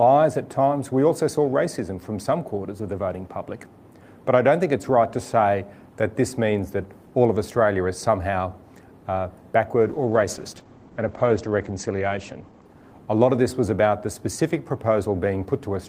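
From 9.8 s to about 14.23 s the audio turns muffled and rough, losing its top end and sounding coarser, then clears again. This is a call bitrate drop: the encoder's rate fell from 32 to 11 kbps, holding its lowest for 2.36 s, and bandwidth narrowed from 20 kHz to 8 kHz.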